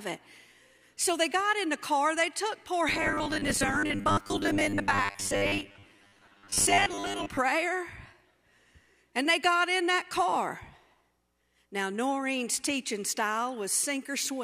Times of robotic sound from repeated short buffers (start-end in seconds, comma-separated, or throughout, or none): 2.89-7.40